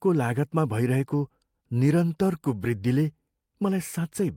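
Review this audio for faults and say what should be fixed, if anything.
Nothing stood out on listening to this speech recording, so there is nothing to fix.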